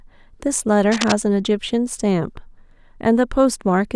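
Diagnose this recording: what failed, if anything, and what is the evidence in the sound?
Analogue wiring. From 0.91 to 1.12 s, dense, uneven scratching sits just below the speech. Cable scratch noise, likely a worn connector's contact resistance jumping.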